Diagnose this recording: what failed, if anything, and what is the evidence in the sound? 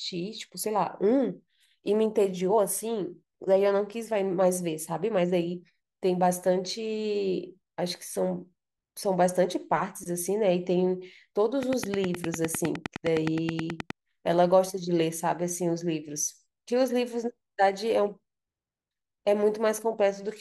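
A train of clicks, 11.63 to 13.91 s: around twenty regular pulses at 9.7 per second, well above the speech, likely interference in the analogue wiring.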